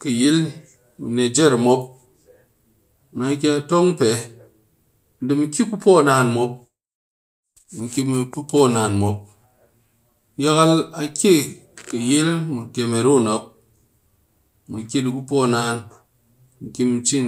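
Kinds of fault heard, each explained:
No technical faults are audible anywhere in the recording.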